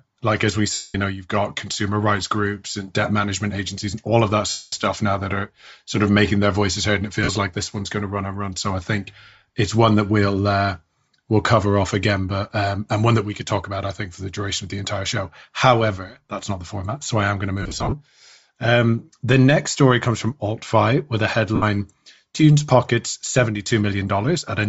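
Bluetooth LC3 compression runs through the whole speech recording. The upper spectrum has a breathy, grainy edge, and the high band sounds thin and noise-filled rather than detailed. That is likely the LE Audio transform codec at a low rate, which fits roughly 32 kbps with 7.5 ms frames: it discards much of the top end and substitutes shaped noise, and the damage is plainly audible. Lost LE Audio frames interrupt the audio at 0.73–0.95 s, 4.50–4.73 s, 7.23–7.28 s, 17.62–17.94 s and 21.55–21.63 s. The longer gaps, at about 210 to 225 ms, fade toward silence. The decoder keeps repeating the last good spectrum with randomised signs and lowers its level as the loss goes on. The 7.23 s and 21.55 s losses are brief glitches of about 45 and 68 ms. Around 17.6 s the dropouts come in scattered bursts over about 300 ms, with no single run much longer than about 40 ms.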